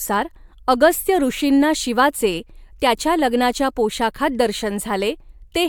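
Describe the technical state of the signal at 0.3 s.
The speech at 0.3 s is intact, with no technical fault at that moment.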